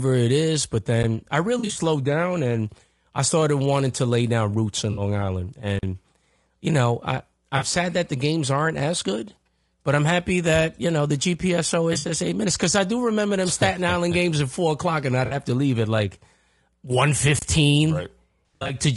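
Throughout the speech, the voice sounds rough and grainy with noise between the harmonics, and the top band sounds lowered or synthetic. This is most likely low-delay AAC compression, AAC-ELD at 32 kbps, where the coder cannot afford to code every frequency line precisely. On a spectrogram, the gaps between harmonic stripes fill with speckled noise and the upper band looks smeared or patterned instead of detailed.

AAC frame loss with concealment strikes six times: 1.59–1.81 s, 4.91–5.01 s, 7.57–7.63 s, 11.93–12.11 s, 15.25–15.35 s and 18.47–18.75 s. Frames went missing, and the decoder rebuilt them from the last good spectrum, either with scrambled signs or with interpolated energy. The missing stretches come in steps that fit 20 ms frames. The first loss totals 120 ms spread over 160 ms, with runs up to about 40 ms. The fourth totals 100 ms over 160 ms, and the last totals 160 ms over 240 ms, both with runs up to about 70 ms. 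The others lose 60, 40 and 60 ms. Each sounds like a smeared, noisy or phasey patch. A spectrogram shows blurred, stretched copies of the preceding spectrum, with the harmonic detail washed out.

A block of digital silence cuts in twice, for 40 ms at 5.79–5.83 s and for 30 ms at 17.39–17.42 s. The output buffer was likely not filled in time, or a calculation produced invalid numbers. Either way, the sound drops out and returns with no fade, heard as a short hole. The waveform shows a flat line with abrupt edges, and the spectrogram shows an empty vertical band.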